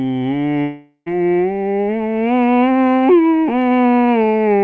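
From 0.62 to 1.08 s, a fading buzz replaces the music, likely a long network dropout; the spectrogram shows smeared bands thinning into a short gap.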